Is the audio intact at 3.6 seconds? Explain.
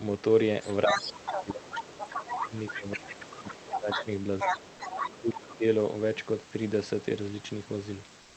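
No. From 0.61 to 4.05 s the other side's voice leaks through, nearly as loud as the talker, likely from loudspeaker echo the canceller missed, showing as a second, overlapping harmonic pattern on a spectrogram. Speech is suppressed in double talk from 0.86 to 4.07 s, with dips of up to around 20 dB, likely because the canceller turned both voices down. The waveform shrinks in patches.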